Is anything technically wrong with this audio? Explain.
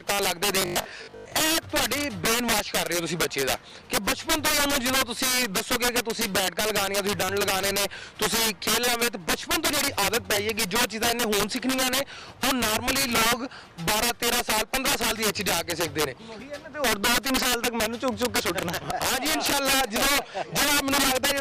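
Yes. There are three faults.

Integer overflow runs through the whole clip. The signal is driven about 7 dB past the integer limit, and a small share of samples, around 7 percent, exceed it. Those peaks wrap to the opposite sign instead of being held. Loud moments crack violently, far harsher than clipping.

From 0.62 to 1.32 s there is a robotic sound from repeated short buffers. A rigid, metallic buzz at 50 Hz follows the original only roughly. The likely cause is fresh audio arriving too slowly, so a 20 ms buffer is replayed and about half the real audio is lost.

Between 0.77 and 0.81 s, compressed frames are skipped. About one 20 ms frame is never decoded, so the audio jumps ahead by that amount.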